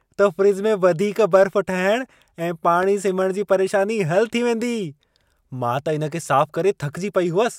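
At about 2.83 to 2.85 s there's a single loud pop punching through the speech, peaking a few dB above it. It's most likely a voltage spike from a plug, switch or static discharge, shaped into a short sharp thump while the speech carries on underneath.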